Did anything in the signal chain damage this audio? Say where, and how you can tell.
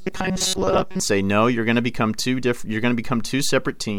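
Yes. From 0.01 to 1.0 s the speech turns into a rigid, metallic buzz locked at 188 Hz that only loosely follows the words, which is robotic sound from repeated short buffers. This is likely a driver or buffer stage running short of fresh audio and looping its last fragment of about 5.3 ms (one cycle of 188 Hz) to fill the gap. The repetition imposes that fixed pitch, and most of the real speech in that stretch is skipped.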